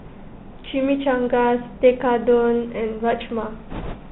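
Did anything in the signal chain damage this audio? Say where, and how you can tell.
Yes. The whole recording sounds boxed-in and narrow, with no content above 4 kHz, scratchy sibilants, and a fine granular hiss beneath the speech. That points to the codec stage: a Bluetooth CVSD headset codec, whose one-bit adaptive delta steps cannot keep up with loud high frequencies.

From 3.70 to 3.95 s a rushing, crackly noise rises over the speech, with no sharp clicks. This is bit errors on a Bluetooth voice link, at a rate of a few percent. Each flipped CVSD bit nudges the waveform only slightly before fading, so the damage builds into noise.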